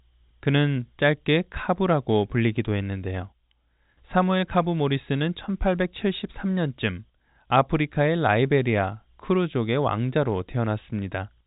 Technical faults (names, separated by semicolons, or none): none